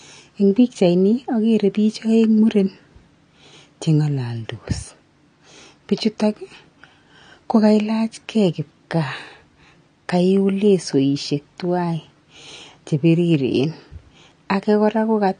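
Speech throughout the clip is dull, with nothing above 9.7 kHz, and sibilants and sustained sounds carry a smeared, warbling texture. The likely cause is AAC compression, with AAC-LC quantising coarsely and discarding the top band, consistent with a low bitrate of around 32 kbps.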